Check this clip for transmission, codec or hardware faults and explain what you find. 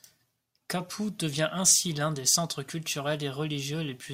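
Checking this clip turns up no faults to explain.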